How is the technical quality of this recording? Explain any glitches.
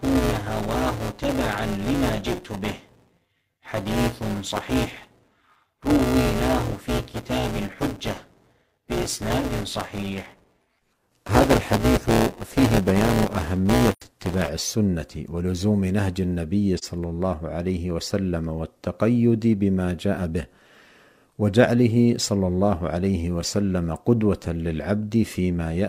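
The recording has two problems: a buzzy first half and a couple of brief dropouts.

From 0 to 14.49 s there's buffer tearing. Writer and reader have slipped, so a fifth of each buffer replays audio about 10 ms stale, causing a 188 Hz rattle that fits a 256-sample buffer.

AAC frame loss with muting hits at 13.92–14.02 s and 16.78–16.84 s. The missing spectrum is zeroed, leaving a soft-edged hole of 85.3 ms and a brief 42.7 ms dip.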